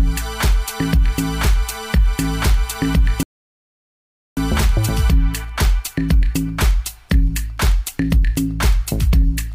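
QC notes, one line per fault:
3.23 to 4.37 s, rebuffering stall: the sound drops abruptly to silence for about 1.14 s, then picks up exactly where it stopped, with nothing skipped. The player ran out of downloaded audio and paused until more arrived, adding time rather than losing any.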